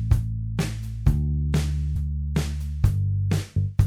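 At 1.95 s, compressed frames are skipped: about 150 ms of audio vanishes, fitting roughly five 26 ms frames, so the audio jumps ahead at that point.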